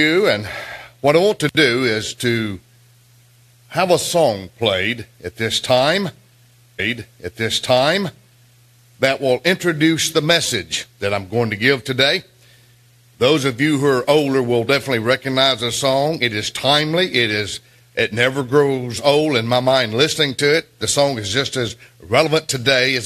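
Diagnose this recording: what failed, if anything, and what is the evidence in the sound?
The failure is at the playback stage, a stream segment repeated. From 6.78 s to 8.78 s the audio replays a stretch it has just played, adding about 2.0 s to the programme, with a small blip where it jumps back. The player fetched or queued the same segment twice, so a whole chunk plays again. A buffer underrun loop would stutter in short fragments, and a dropped segment would lose material. Here nothing is missing; a complete two-second block simply recurs.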